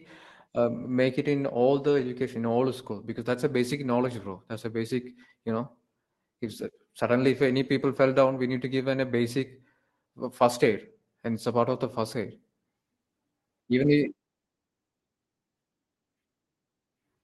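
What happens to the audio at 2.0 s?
A lost packet rebuilt from error correction covers 1.87 to 2.09 s. Packets in this stretch went missing, but each following packet carried a low-bitrate backup copy of the one before it, and the Opus decoder played those copies instead of leaving silence. About 120 ms of audio was rebuilt this way, which fits roughly six lost packets. There is no dropout. Instead the speech turns briefly rougher and noisier, with a grainy, lower-fidelity texture, before clean decoding resumes.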